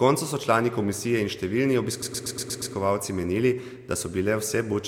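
From 2.01 s to 2.73 s the speech stutters with repeated frames. A block of about 109 ms of compressed audio was delivered again and again, six extra times. The decoder replays that same slice. The stutter adds 0.71 s to the clip.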